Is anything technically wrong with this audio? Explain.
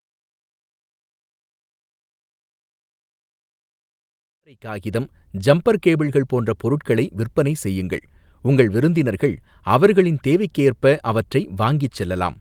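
No, nothing in this audio is technically wrong.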